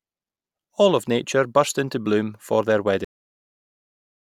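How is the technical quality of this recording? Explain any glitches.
The recording has one clear fault. It ends abruptly. At 3.05 s, right after "into bloom for their", there's a cut-off end. The final buffers were never written, so the speech stops mid-sound and drops straight into digital silence with no decay.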